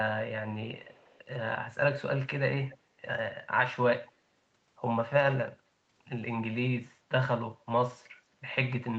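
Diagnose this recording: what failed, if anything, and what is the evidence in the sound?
Echo leak at the call-processing stage. The likely cause is a far-end echo canceller letting loudspeaker pickup back into the call. A faint delayed copy of the speech trails it from 0.71 to 1.19 s, and briefly at 2.69 to 2.77 s. It lags by about 250 ms, roughly 25 to 30 dB down.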